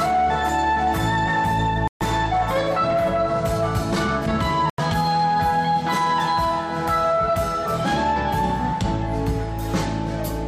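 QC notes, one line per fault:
1.88–2.02 s and 4.70–4.80 s, Bluetooth stall: the sound drops to dead silence for about 133 ms and then about 86 ms, then carries on. This is likely a wireless dropout, where interference delayed audio packets long enough for the headphones' small playback buffer to empty. The output stopped until retransmitted packets arrived, which is why each gap is a clean silence with no garble or noise.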